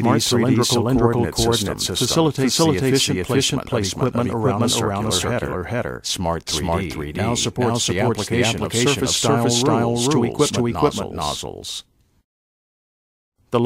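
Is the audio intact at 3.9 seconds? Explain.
No. At 3.9 s, like everywhere else in the clip, there's a doubled audio track: a second full-band copy trails the original by roughly 400 ms at about the same level, with no decay or room colour. It's likely a second capture path or an edit stacking two copies out of step.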